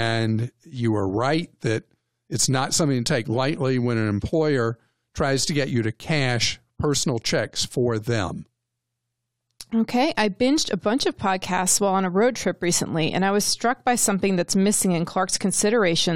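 A speech recording with nothing technically wrong with it.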